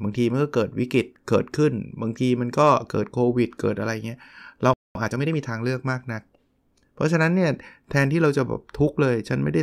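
At 4.74 s the player likely ran out of buffered data or had its output thread blocked, causing a playback stall: the speech cuts off mid-flow into silence for about 0.22 s, then resumes at 4.95 s from the point where it stopped.

To recover the backlog, the player then applies time-compressed catch-up from 4.95 s to 5.37 s, removing short slices and cross-fading the joins. The speech runs at 1.5 times its normal pace without any change in pitch.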